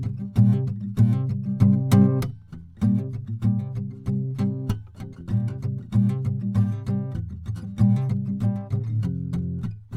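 At 5.20 s the music has a brief burst of lost LE Audio frames. A gap of about 7.5 ms, the length of a single LC3 frame, was filled by the decoder repeating the previous spectrum with random signs. Tonal content smears into a short noisy blur instead of dropping out. What separates it from a plain dropout or click is that the gap is never silent. It is too short to fade away, so it sounds like a brief grainy smudge.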